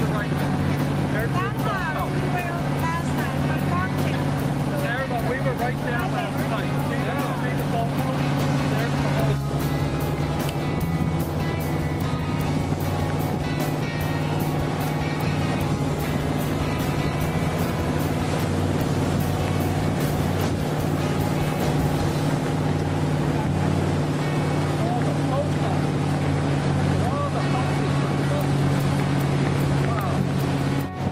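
There's a call bitrate drop from about 16.33 to 18.55 s. The sound turns coarse and muffled for roughly a second and a half at its worst, which fits the encoder being squeezed from around 32 kbps down to 18 kbps before recovering.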